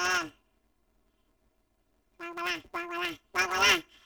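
From start to finish, the stereo stream has been handled as planar audio read as interleaved: each block stores all left-channel samples followed by all right-channel samples, yet playback treats them as alternating left-right pairs. Each block of about 5.8 ms, which fits a 256-sample block, therefore plays twice at double speed. With blocks this short the speech takes on a robotic buzz at about 172 Hz rather than an obvious octave jump, and the overall pace is unchanged.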